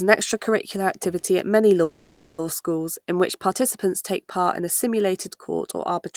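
At 1.83 s, right after "extracurricular activity at many", the speech halts for about 0.57 s in a call audio freeze, resuming at 2.40 s with "schools in which participants". The last sound stretches into a fading buzzy hiss rather than dropping out, and nothing is lost; everything after arrives about 550 ms late. The likely cause is delayed packets draining the jitter buffer. A spectrogram shows a smeared, decaying band; the waveform shows a tapering envelope.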